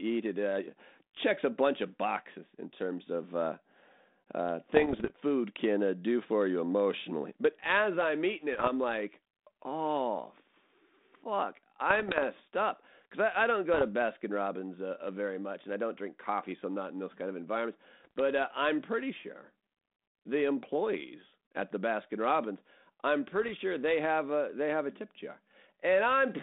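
Bit errors on an ADPCM link, apparently a 32 kbit/s G.726 path, strike at 4.74–5.11, 8.53–8.69, 11.90–12.19, 13.74–13.87, 18.03–18.19 and 23.30–23.50 s. Flipped bits derail the decoder's step size and predictor, giving pops, rough bursts and brief level jumps.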